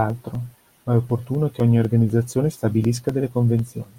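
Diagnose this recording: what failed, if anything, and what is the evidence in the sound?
Periodic USB or driver dropouts: the driver loses a couple of milliseconds every 0.25 s from 0.1 to 3.85 s, leaving ticking silent gaps, seen as evenly spaced waveform notches.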